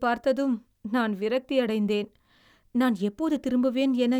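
No faults turn up anywhere in the recording.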